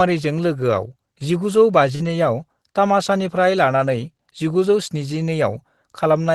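At 1.95 s, roughly 40 ms of the call failed to arrive, and the receiver covered the hole with short concealed packet loss, stretching the preceding sound for about 43 ms before fading back. It is heard as a brief smear or wobble; on a spectrogram the harmonics or noise run on unnaturally smooth and unchanging, then rejoin the real signal.

From 2.00 to 2.14 s, a lost packet rebuilt from error correction follows. About 80 ms came from the low-bitrate copies carried in later packets, which points to several separate losses. There is no gap, but the sound turns rougher and grainier, with a coarser, noisier texture in the spectrogram.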